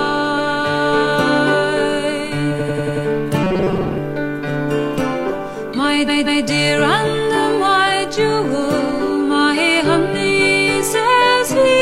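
From 2.56 to 3.02 s the sound stutters: a chunk of about 93 ms plays five extra times in a row. These are repeated frames. A short run of compressed data, which fits a pair of frames, was decoded again and again, stretching the audio by about 0.46 s.

From 3.44 to 3.98 s the sound turns into a rigid, metallic buzz at 188 Hz that roughly tracks the underlying sound. This robotic sound from repeated short buffers is likely caused by playback running short of fresh audio and looping a buffer of about 5.3 ms. That loop length sets the fixed pitch, and roughly half the real material is skipped.

From 6.04 to 6.41 s another stutter follows: a block of about 186 ms, which fits four frames, is replayed twice more. The repeated frames add about 0.37 s.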